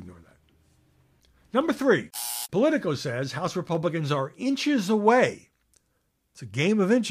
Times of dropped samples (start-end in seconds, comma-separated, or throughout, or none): 1.61, 3.75